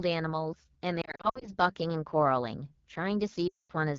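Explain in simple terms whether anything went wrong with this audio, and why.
Yes, two things went wrong. Throughout, the AMR wideband (HD Voice) codec was squeezed to a very low setting, so the speech sounds rough and raspy rather than simply muffled or dull. Lost AMR speech frames cause dips and warbles from 1.01 to 1.49 s and again from 3.47 to 3.73 s, where the sound briefly dips and fades before recovering. A dropout would cut off abruptly, but here the sound fades away instead.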